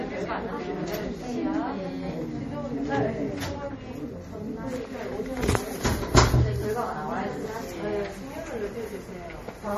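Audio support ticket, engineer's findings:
Watery, swirly texture across the whole clip, transients smeared, nothing above 15 kHz. Likely MP3 compression at a starved bitrate, consistent with roughly 40 kbps: treble cut at a fixed frequency, weak frequency lines dropping in and out between frames.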